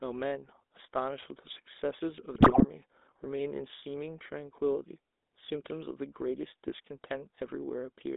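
From start to finish the speech carries the sound of the GSM full-rate codec. The band runs from about 250 Hz to 3.7 kHz, and within it the voice has a buzzy, gravelly grain. The codec rebuilds the excitation from a sparse train of regularly spaced pulses through a vocal-tract filter. The roughness points to the 13 kbps full-rate coder. Plain telephone band-limiting would sound muffled but smooth, not grainy like this.

From 2.34 to 2.66 s GSM bit errors break in. Corrupted bits reach the decoder, so filter, pitch and gain values come out wrong for a string of consecutive frames. The voice squawks and gargles, with sudden pops where a bad gain value spikes the level. Packet loss would leave gaps or smeared repeats. Here the decoder keeps producing sound, but it is warped.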